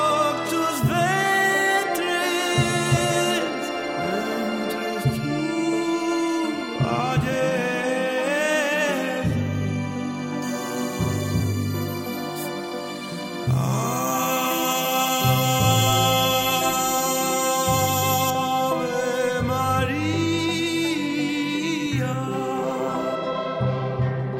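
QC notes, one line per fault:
10.42–18.30 s, pre-emphasis left on: the treble boost applied before recording or transmission was never undone by the matching de-emphasis, so highs stand about 13 dB above 1 kHz by 10 kHz, a rising slope that fits the 75 µs FM curve. The sound turns thin, glassy and sibilant for this stretch, then returns to normal. On a spectrogram the band above roughly 3 kHz brightens abruptly at the start and dims abruptly at the end; the waveform shows sharper, spikier transients.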